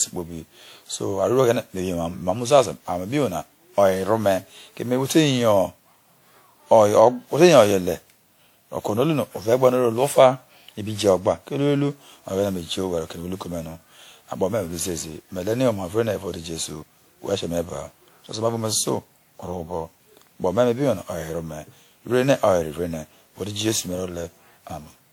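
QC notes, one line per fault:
throughout: generation loss. Swirly, hollow, smeared speech with blurred attacks, likely from around ten lossy re-encodes at a rate that fits 96 kbit/s WMA.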